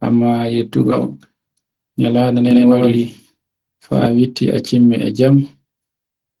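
At 0.91 to 0.93 s the speech hits a skip ahead: roughly 0.7 s of audio never plays, and the sound on either side of the cut is butted together with no fill, so the delay shrinks by about the same amount. It sounds like a sudden lurch, with a syllable or more simply gone. On the waveform the envelope changes shape abruptly at the splice. A spectrogram shows formant tracks that break off and restart elsewhere, with no silent gap between them.

From 1.49 to 1.92 s a jitter buffer speed-up takes hold. The receiver had built up more delay than it wanted, so it repeatedly trimmed short pitch-period-sized pieces, removing something like 70 ms in all. Playback runs at 112% of normal pace while the pitch stays put, so the talker sounds briefly rushed. A spectrogram shows harmonics held at the same spacing while syllables and transitions are squeezed closer together in time. The waveform's periods look normal, but there are fewer of them.

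Between 2.51 and 4.07 s the speech carries a doubled audio track: a second, full-band copy trails the original by about a tenth of a second at roughly equal level, most likely picked up again through a slower capture path or left by misaligned copies in an edit. It sounds like a hard, dry slapback with no room tail. The echo switches on and off abruptly at the ends of this stretch. A spectrogram shows every onset and formant pattern repeated at a fixed lag. The waveform shows overlapping, near-identical envelopes.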